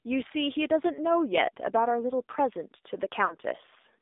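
Throughout, the speech carries the sound of the AMR narrowband mobile codec. The band runs only from about 250 Hz to 3.7 kHz, so it sounds thin and boxy. The voice is buzzy and synthetic, which fits a low bitrate near 7.4 kbps.

From 3.26 to 3.35 s, lost AMR speech frames cause a dropout. The decoder fills the roughly 40 ms gap, which fits two missing frames, by repeating old settings at falling gain. The sound smears briefly, dips, then returns rough.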